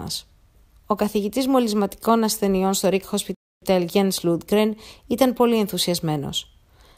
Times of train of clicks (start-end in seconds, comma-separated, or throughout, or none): none